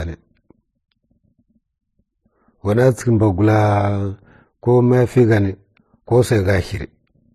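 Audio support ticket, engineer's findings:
Transcoding between lossy codecs, throughout: mixed smeared and swirly artefacts, nothing above 14.8 kHz; likely a low-rate HE-AAC encode re-encoded to MP3, second encoder wasting bits on inherited artefacts.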